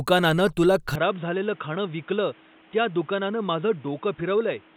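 Speech that abruptly turns dull and boxy at 0.95 s and stays so to the end, with no gap at the switch. The input was likely switched to a poorer device. A spectrogram shows everything above 3.8 kHz vanishing, a new noise floor around 30 dB down, and the waveform shrinking by about 5 dB.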